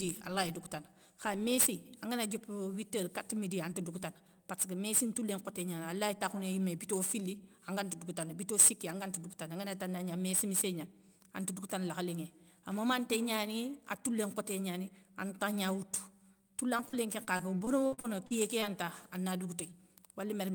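Sample clock jitter runs through the whole clip. The converter's clock wobbles, so each sample is taken slightly off its proper moment. The timing error is a few microseconds. A steep waveform changes fast, so a small timing slip becomes a sizeable level error. That error sits only about 15 dB below the speech. It is heard as a grainy hiss riding on the voice. It grows on loud and bright sounds and drops away in the pauses.

Repeated packet loss, heard as a robotic sound, hits from 16.77 to 18.71 s. Audio goes missing again and again in quick succession. The longest hole is 52 ms. Each hole is patched by stretching the sound just before it. About 340 ms is lost, and 313 ms of it is filled this way. The patches cover about 17% of the stretch. The speech turns choppy and robotic, with small pieces dropped.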